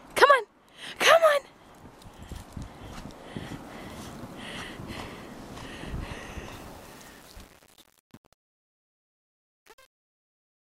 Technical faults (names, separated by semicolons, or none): truncation distortion on a fade